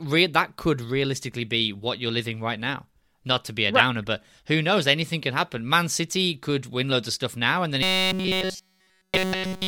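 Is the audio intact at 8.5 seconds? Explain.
No. From 7.83 s to 9.67 s, right after "stuff now and then", new audio is likely arriving too seldom, so a stretch of about 5.3 ms is replayed repeatedly in place of the real signal. This robotic sound from repeated short buffers turns the speech into a rigid, metallic 188 Hz buzz throughout.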